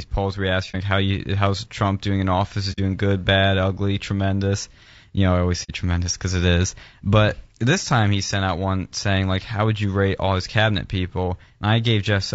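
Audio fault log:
throughout, low-delay AAC compression: The speech sounds rough and grainy, and the damage is plainly audible. Noise seems to fill the gaps between the pitch harmonics. The top band sounds thin and synthetic. This is likely AAC-ELD, the low-delay coder of video calls, at a low bitrate near 32 kbps. Its short frames cannot separate closely spaced harmonics well. With few bits to spend, the coder smears noise across the spectrum.
0.71–0.75 s, 2.72–2.79 s, 5.63–5.71 s, AAC frame loss with muting: Three brief soft-edged holes cut into the speech. The first falls after "polls where he asks" and before "like how you how's". The second falls after "doing in office is" and before "good bad ugly tremendous". The third falls after "you know I always" and before "tremendous because it is". The first gap fits one lost frame of about 30 ms. The other two fit two frames, about 60 ms each. 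The decoder zeroed the missing spectrum. The overlapping windows then fade the sound out and back in.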